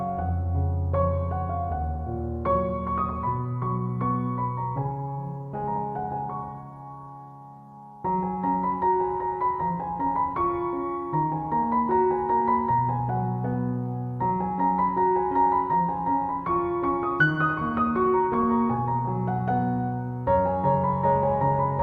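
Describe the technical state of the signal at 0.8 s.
At 0.8 s the signal is intact, with no audible dropout, distortion, glitch or other technical fault at that point.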